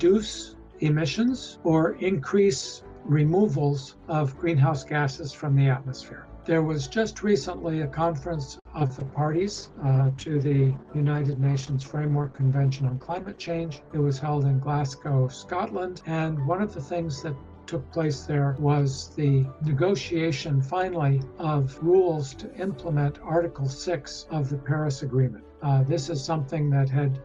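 From 8.59 to 9.05 s there is repeated packet loss, heard as a robotic sound. Packets went missing or arrived too late several times in quick succession, and the receiver filled each hole by extending the last bit of audio it had. Four short gaps fall within half a second, the longest about 57 ms, and nearly a third of that stretch is patched-over sound. The result is a choppy stutter with small pieces of the audio simply absent.

Overlapping the end of that burst, a call bitrate drop runs from 9.00 to 15.92 s. The bandwidth estimate collapsed, and the encoder was told to spend far fewer bits. The coarsening points to a fall from around 48 kbps down to roughly 12 kbps, held at the bottom for about 4.4 s. With so few bits the codec quantises roughly and trims away the upper frequencies, so the sound turns muffled and watery, with a gritty texture, until quality climbs back near 15.9 s.

Inside that degraded stretch, from 12.76 to 13.00 s, comes a jitter buffer speed-up. 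Audio had piled up in the receive buffer beyond its target, so the receiver shortened the backlog by cutting out tiny pitch-period-sized slices repeatedly. A few tens of milliseconds disappear over about a quarter of a second, making the audio run at about 114 percent speed. The pitch stays put, but the passage sounds briefly hurried and rushed.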